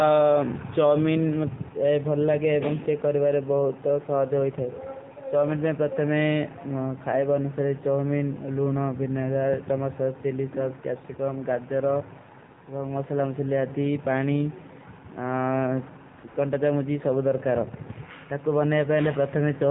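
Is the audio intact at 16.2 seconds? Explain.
No. At 16.20 to 16.24 s, and again at 16.28 to 16.36 s, the sender judged the talker silent and stopped sending speech frames. The receiver filled those 40 ms and 80 ms gaps with AMR comfort noise, so the real sound drops out and is replaced by brief patches of smooth, steady synthetic hiss.

Underneath, the AMR narrowband mobile codec is at work across the whole clip. It discards everything above 4 kHz and rebuilds speech from a crude vocal-tract model, and its plainly buzzy, synthetic quality fits a low rate of around 7.4 kbps.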